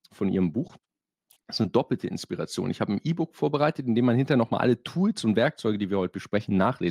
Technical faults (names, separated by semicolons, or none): short concealed packet loss